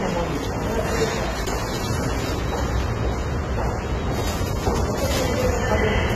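Transcoding between lossy codecs runs throughout: nothing above 14.2 kHz survives, and stacked smearing and swirly artefacts likely come from AAC-LC re-encoded as HE-AAC at low bitrates.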